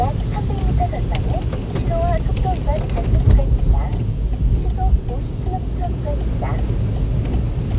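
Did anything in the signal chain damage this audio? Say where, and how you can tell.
No, nothing in the signal chain audibly damaged these everyday sounds; the signal holds steady and continuous across the whole clip, with nothing that points to a fault at any stage.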